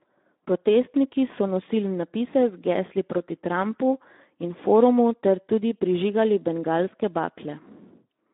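From the first moment to the end, the speech carries Speex codec damage, and it's plainly audible. The voice has that grainy, hoarse CELP texture, and the character of the damage points to a fairly low setting, around 11 kbps. The band is narrow too, running only from about 250 Hz up to 3.7 kHz. So you lose the low body and all the top-end air, leaving that thin, boxed-in telephone-line sound.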